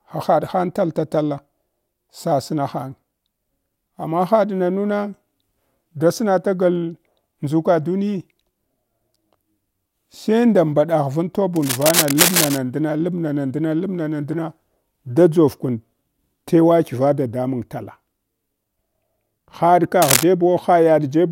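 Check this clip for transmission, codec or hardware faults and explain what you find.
There is one fault in this speech clip, cable scratch noise, occurring twice. From 11.56 to 12.58 s, between "nda mbaɗagh van" and "ndna lab", and again from 20.02 to 20.24 s, dense, uneven bursts of scratching and rustling sit on top of the sound at roughly the same loudness as the speech. The likely cause is a worn cable, connector or control being moved, so its contact resistance jumps around rapidly and injects noise bursts.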